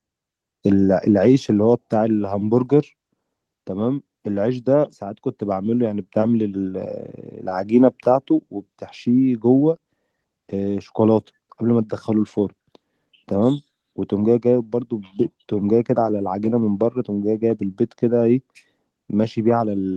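At 7.49 to 7.53 s there is a short concealed packet loss: about 20 ms of the speech never arrived in time, and the receiver filled the gap by extending the preceding sound, then crossfaded back into the real signal. It is heard as a brief smeared wobble in the voice. The speech passes through a call codec, with content stopping around 12 kHz, which fits Opus at a low bitrate.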